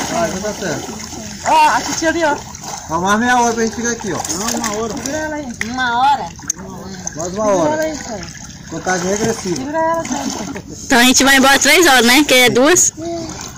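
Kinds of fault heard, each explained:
Hard clipping: a harsh, gritty fuzz rides on every loud moment from start to finish, with the peaks sounding crushed and buzzy. The signal was driven about 22 dB beyond what some stage in the chain could pass, so the waveform's peaks are sliced flat. Around seven percent of the audio sits pinned at that ceiling, and the squared-off tops spray added harmonics high into the spectrum, producing the constant distortion.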